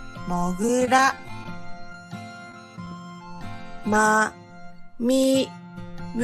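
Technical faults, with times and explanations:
0.62 to 1.46 s, repeated packet loss (robotic sound): ten packets went missing in quick succession, about 90 ms in all, none longer than 13 ms. Each time, the receiver stretched the last sound to cover the hole, so about 11% of this stretch is patched rather than real. The patches come close together, which gives a choppy, mechanical texture.
2.50 to 2.92 s, repeated packet loss (robotic sound): five more packets dropped, about 50 ms lost in total and again none longer than 13 ms. Concealment covered roughly 12% of the span, and the same clipped, robotic grain returns briefly.
1.93 to 1.95 s, short concealed packet loss: a single 10 ms piece of audio arrived too late to be decoded. The receiver carried the preceding sound across the gap and then blended back into the real signal. The result is a tiny smear or wobble.
3.39 to 3.41 s, short concealed packet loss: another 10 ms packet was lost, and about 16 ms of the sound was filled in while the receiver faded back to the real audio. 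This leaves a brief wobble in the sound.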